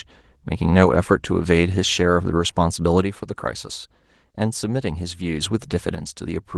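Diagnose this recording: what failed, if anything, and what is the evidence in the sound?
One channel drops out twice: from 3.02 to 5.42 s, and from 5.95 s to the end. Each time the speech level steps down abruptly by about 6 dB, since the mono sum loses half its shared signal. The light Opus coloration continues throughout. An intermittent analogue connection is the likely cause.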